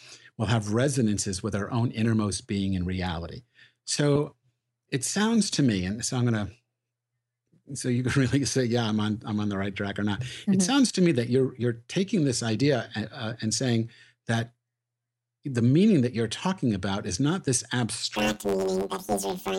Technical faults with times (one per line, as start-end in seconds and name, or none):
18.16-19.59 planar audio read as interleaved